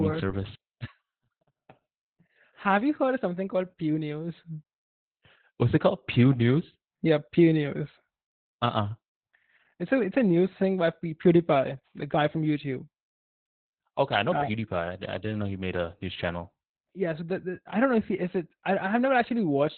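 Throughout the speech, Opus voice compression is heavy: the sound points to an 8 kbps SILK-only mode with narrowband coding, cutting everything above 4 kHz. Coarse excitation coding leaves the voice muffled, hoarse and slightly robotic from start to finish.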